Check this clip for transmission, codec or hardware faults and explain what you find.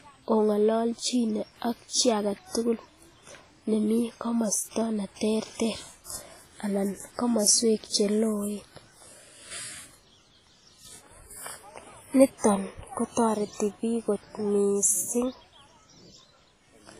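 One codec fault runs through the whole speech clip. From start to finish the audio sounds heavily damaged: transients ring and smear, sustained sound turns washy, and a hiss rises and falls with the signal. Nothing is present above about 15.2 kHz. This points to WMA compression, likely at a low bitrate around 24 kbps. The transform's long blocks spread quantisation noise over tens of milliseconds, and bits are so scarce that weak spectral lines are zeroed.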